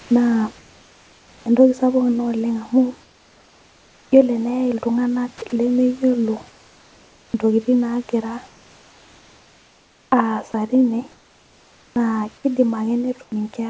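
A speech recording carried over a call path whose high end stops at 8 kHz, consistent with a G.722 codec, with room noise sitting about 33 dB below the voice. From 0.00 to 1.46 s the sound is chopped by the voice detector: the opening alternates between real signal and a smooth synthetic fill, with roughly a second of it replaced in total, so syllable edges drop out. This is likely discontinuous transmission toggling on and off at low levels. Comfort noise replaces the background in four pauses: 3.02–4.12 s, 6.48–7.34 s, 8.48–10.54 s and 11.12–11.96 s. In these gaps the natural room texture turns into a steady, featureless hiss. Where it can be measured, that hiss is about 3 dB quieter than the real background, which itself sits about 33 to 35 dB below the loudest speech. This likely happens because the sender stops transmitting when it judges there is no speech, and the receiver fills the gap with noise shaped roughly to that background. 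Sound is also dropped by the voice detector three times. At 5.38–5.42 s about 20 ms of signal is lost, at 10.52 s about 10 ms, and at 13.24–13.32 s about 50 ms. Each time, a quiet fragment is likely treated as background and swapped for comfort noise, so the sound briefly gives way to steady noise before the detector triggers again.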